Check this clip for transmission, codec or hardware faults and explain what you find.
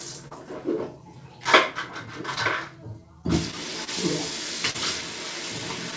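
Three kinds of transmission fault appear in this everyday-sound recording, all from the network and receive buffer rather than the codec or hardware. The call path runs through a wideband codec with nothing above 8 kHz, which fits G.722 at 64 kbps.

Clock drift between sender and receiver runs through the whole clip. The sender's sample clock is about 3 percent slower than the receiver's, so the jitter buffer keeps draining and the receiver has to stretch or repeat small slices of audio to keep playing. You hear this as small, irregularly spaced timing hiccups and slight unevenness in rhythm from start to end.

There are two short stalls from a late packet, at 0.28 to 0.34 s and at 4.71 to 4.77 s. In each case a packet missed its playout time, the buffer ran dry, and the receiver held the last sound for 29 ms and then 36 ms until the packet arrived. Playback then resumed from the same point, so nothing is lost. 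The sound briefly hangs, with a faint buzzy or dipped quality.

Scattered short gaps occur between 1.15 and 3.90 s. About ten packets went missing or arrived late, spread singly across that span. Each hole, the longest about 30 ms, was patched by extending the preceding sound, covering about 100 ms in all, roughly 4 percent of the stretch. The result is a series of brief ticks, smears and stutters.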